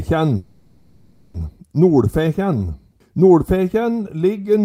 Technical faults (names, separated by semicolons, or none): call audio freeze